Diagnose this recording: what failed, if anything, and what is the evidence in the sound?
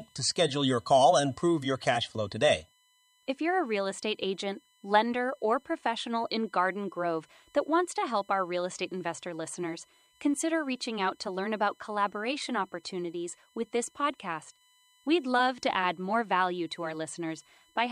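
What failed is the analogue side, specifically power or ground: there's USB whine running under the speech from start to finish. It's a steady fixed-pitch tone built on 1 kHz, with its strongest component at the 3 kHz harmonic, sitting roughly 40 dB below the speech, so it's faint but always there. The USB bus pulls current in 1 ms frames, and that 1 kHz rhythm is leaking into the audio path through the supply or a shared ground.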